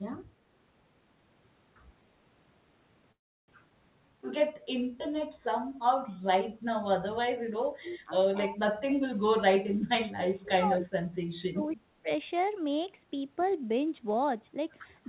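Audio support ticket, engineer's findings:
Call audio freeze, 3.12–3.50 s: sound halts for about 360 ms, mostly silent for roughly 310 ms, then resumes where it stopped with nothing lost. Likely delayed packets draining the jitter buffer; receiver stretched the last audio, then waited.

Skip ahead, 3.70–3.72 s: abrupt forward jump, roughly a fifth of a second of speech gone, edges spliced nearly directly. Audio dropped in transit or by an overflowing jitter buffer while later audio was already waiting.

Jitter buffer slow-down, 3.99–6.50 s: speech runs at about 93% speed, pitch unchanged, 191 ms added in total through repeated pitch periods and pause fragments. Buffer rebuilding its reserve.

Speech suppressed in double talk at 7.21–8.14 s, 8.47–9.34 s, 9.56–11.06 s and 11.49–12.10 s: near-end speech dips by up to about 30–35 dB. The likely cause is the echo canceller attenuating its own talker while the far end speaks.

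Echo leak, 7.90–7.95 s: brief, very faint delayed copy of the speech, around 40 dB below it, lagging 258 ms. Likely residual loudspeaker echo passed by the loudspeaker side's echo canceller. Audio band ends at 4 kHz, consistent with the G.711 A-law path.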